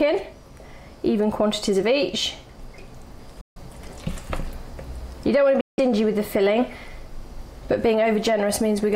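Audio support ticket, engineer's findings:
Bluetooth dropout, 3.41 to 3.58 s and 5.61 to 5.80 s: two silent gaps, roughly 0.15 and 0.17 s. Likely a wireless link fault, where late packets to the headphones are discarded, and playback resumes further on as if it had continued.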